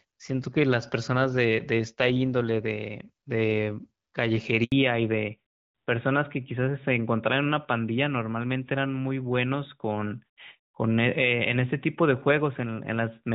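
At 4.64 s a handover gap cuts the speech for 80 ms, until 4.72 s, as the call switches networks and no frames arrive. From 4.72 s to the end, a fallback to narrowband removes everything above 4 kHz. The earlier HD Voice sound, consistent with AMR-WB at around 12.65 kbit/s, gives way to a duller, rougher tone that fits AMR-NB at about 12.2 kbit/s.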